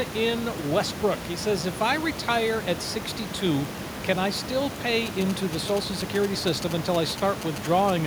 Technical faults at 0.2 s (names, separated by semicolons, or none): none